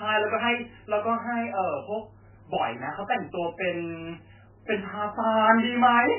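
Throughout the speech, the sound is dull and watery, with nothing above 3 kHz. This is heavy damage, likely from MP3 compression at a very low bitrate, around 8 kbps. On a spectrogram, energy stops at a flat 3 kHz ceiling, with weak components flickering on and off.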